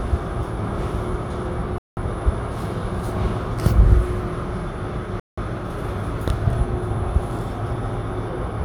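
Bluetooth stalls at 1.78 s and 5.20 s: the sound drops to dead silence for 188 ms, then for 177 ms ending at 5.38 s, before picking up again. The likely cause is radio interference holding back packets on the wireless link, so the headphones' small receive buffer drained completely and playback paused until the retransmitted packets arrived. Each gap is an abrupt cut, not a fade.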